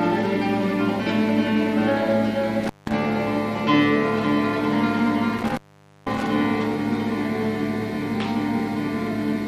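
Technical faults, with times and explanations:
2.63 to 2.92 s, intermittent contact: the sound crackles and drops out for 0.17 s, as a loose cable or plug momentarily opens the signal path.
5.38 to 6.26 s, intermittent contact: a longer break, with crackle at its edges and a 0.49 s gap of hiss, where the loose connection opens again.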